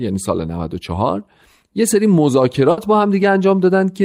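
At 2.71 s, a burst of packet loss occurs: a run of consecutive packets in the speech stream went missing or arrived too late to play. The receiver covered the hole by extending the last sound it had for about 60 ms, letting it fade as the gap continued, so there's a brief held, dying tail. At 2.80 s the speech resumes further along, with a 60 ms stretch simply absent, which gives an abrupt skip.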